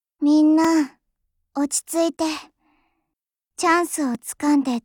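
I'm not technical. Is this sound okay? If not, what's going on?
No. At 0.64, 2.50 and 4.15 seconds, the sound briefly drops to complete silence. This is a block of digital silence: the program likely didn't deliver audio in time, so tiny stretches of about 2.4, 0.8 and 1.3 thousandths of a second were filled with nothing, the last fitting a 64-sample block. These gaps are too short to hear as holes. Each one comes across as a tick or dip, because the sound stops and restarts abruptly rather than fading.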